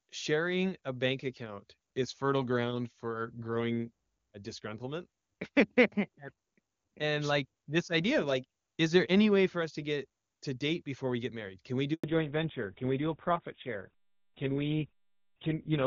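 At 11.94 s the call is passed from one network to another, and for about 100 ms, until 12.04 s, no speech frames arrive. This handover gap makes the voice fade out almost instantly, leaving a short dead silence in which whatever was said is lost.

From 12.04 s to the end, the call falls back from wideband HD Voice to a narrowband codec. The sound fits a drop to GSM full rate. Everything above 4 kHz disappears, so the voice turns muffled, duller and rougher than the clean wideband sound before the switch.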